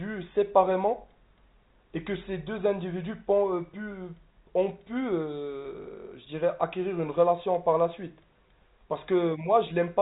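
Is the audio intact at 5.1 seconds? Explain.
Yes, the audio is intact at 5.1 seconds: the speech runs on without any break or disturbance, carried through G.711 telephone coding that simply keeps the sound below about 3.8 kHz.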